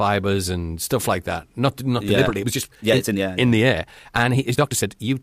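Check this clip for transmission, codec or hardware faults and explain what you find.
One fault, a time-stretched section. From 2.03 s to the end, the speech turns rushed at about 1.43 times its pace while pitch holds, likely from software squeezing the audio by dropping short pieces.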